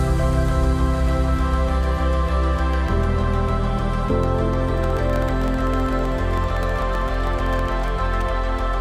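From 4.78 s to 7.72 s a steady train of small ticks runs through the sound, one every 64 ms, or roughly sixteen a second, and only where there is signal. These are periodic USB or driver dropouts. Something held up the USB link or audio driver at a fixed interval, and each time about a millisecond of audio was lost and replaced with silence. Around fifty of these tiny gaps occur, each cutting the waveform abruptly.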